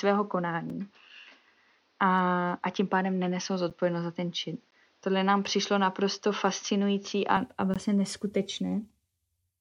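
From the start to 7.37 s the speech is band-limited, with nothing above 6.6 kHz, so it sounds dull and boxy, with a faint noise floor roughly 40 dB down. The level holds steady. This is likely an input switched to a poorer device, reverting cleanly at 7.37 s without silence.

Hard-edged silent holes at 0.70, 3.70, 4.71 and 7.74 s, lasting 4, 9.9, 14.1 and 17.9 ms, are gaps between stream segments. They fall on 1 s segment boundaries, where mismatched time stamps leave space that is padded with silence.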